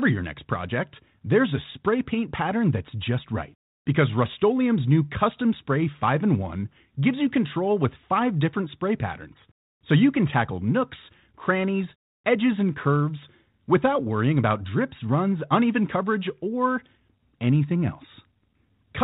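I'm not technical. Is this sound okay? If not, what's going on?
Yes, nothing has gone wrong in this recording. It has been passed through G.726, a standard telephone coding, so it has the slightly narrow, phone-line quality that comes with it.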